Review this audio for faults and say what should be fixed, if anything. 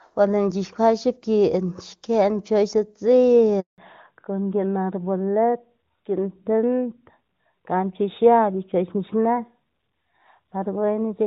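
A handover gap opens at 3.60 s. The call was passed from one network to another, and no speech frames arrived while the link changed over. The sound dies away within a few tens of milliseconds and stays silent for 180 ms, until 3.78 s, when the new connection begins carrying audio. Whatever was said in that stretch is gone and cannot be recovered from the recording.

From 3.78 s to the end, there is a fallback to narrowband. After the handover the call came back on an older narrowband codec instead of the HD Voice link it started on. Before the switch, the sound has the full, open top end of AMR-WB, consistent with its highest rate. Afterwards nothing above 4 kHz remains. The voice turns noticeably duller and rougher, losing the crispness of sibilants and the airy upper band. The character fits AMR-NB at 12.2 kbit/s.

Both faults come from the same event, so the fix is to make the handover seamless and keep wideband negotiated on the target network, so the link switches without a frame gap and HD Voice is maintained afterwards.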